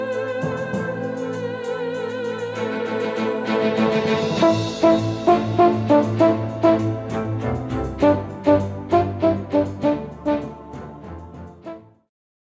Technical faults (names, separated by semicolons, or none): none